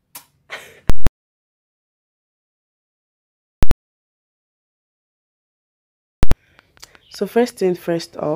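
At 0.90 s the audio hits invalid numbers at full scale. A calculation produced infinite or invalid values, and they were clamped to the maximum, so the output sticks at one extreme value until 1.07 s. That 0.17 s span fits an 8192-sample processing block. You hear a very loud pop where it starts, nothing at all during the block, and a second pop where it ends. The same fault comes back at 3.63 to 3.71 s and at 6.23 to 6.32 s. Both of those are about 85 ms long, which points to a 4096-sample block. A click train sounds different: this fault replaces the sound completely for the length of the block.

From 6.59 to 7.51 s a train of clicks ticks over the sound. It is a regular run of about seven near-identical pulses at 5.5 per second, peaking at roughly the level of the audio itself. The likely cause is interference from nearby equipment or a faulty connection injecting short pulses. The difference from the full-scale blocks is that these clicks are brief and the audio carries on between them.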